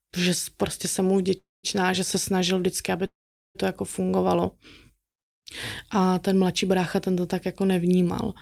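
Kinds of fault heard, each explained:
call audio freeze: The speech halts twice, at 1.37 s and 3.06 s. A short fading tail gives way to near silence for about 0.18 s and 0.43 s, within gaps of about 0.26 s and 0.49 s. Speech then resumes exactly where it stopped, with nothing lost. Delayed packets emptying the jitter buffer are the likely cause.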